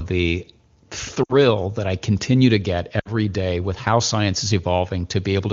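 At 1.24 to 1.34 s, just before "that I continue to", lost AMR speech frames make the speech drop to near silence. The decoder stretches the last good sound at falling gain. It recurs at 2.99 to 3.12 s, between "I continue to get" and "day with how science". Each 60 ms gap fits three lost frames.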